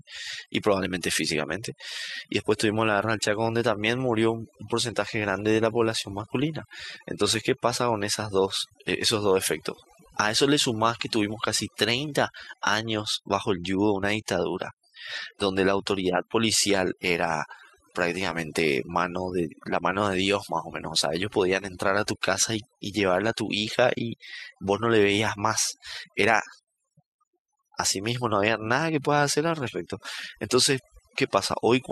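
From the first second to the last, the speech carries overdone noise removal. Someone ran a noise reducer far too hard, so any frequency band sitting close to what it took for noise got pushed way down or shut off entirely, and the softer parts of the voice got swept out along with the noise. What's left between phrases is near silence with little twinkling specks.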